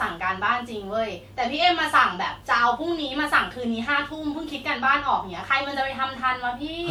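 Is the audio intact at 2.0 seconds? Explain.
No. At 2.0 seconds the speech carries generation loss, present for the whole clip. It sounds swirly, smeared and hollow, and consonant attacks are blurred. The likely cause is repeated decoding and re-encoding, around seven passes, through a codec that fits WMA 1 at 128 kbit/s. Each pass re-quantises on a shifted frame grid, so noise and spectral holes pile up. A single low-bitrate encode would narrow the band, but here content still reaches about 20.1 kHz. The damage comes from the accumulated passes, not from lost bandwidth.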